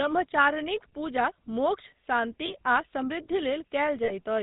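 The whole recording carries GSM full-rate codec damage, plainly audible, consistent with the 13 kbit/s GSM full-rate coder. The vocal tract is modelled and driven by sparse regular pulses. Nothing above 4 kHz survives. Speech sounds buzzy and gravelly throughout.

Lost GSM frames occur twice. At 2.46 s, about 20 ms is patched, which fits one missing frame. At 4.04 s, about 40 ms is patched, pointing to two frames. Each gap repeats the last good frame, giving a brief rough, metallic ring.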